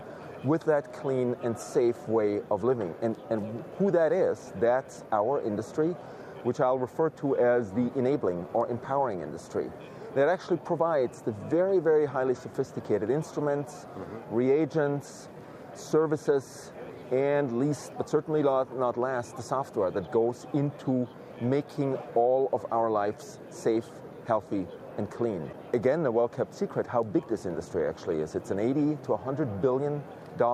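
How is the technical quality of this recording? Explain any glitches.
No glitches or technical faults can be heard anywhere.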